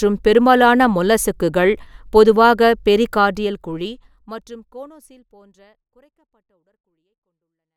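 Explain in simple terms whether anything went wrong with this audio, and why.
Nothing went wrong with this speech audio; the gentle fade-out from about 3 seconds to the end is a normal editing touch, not a problem.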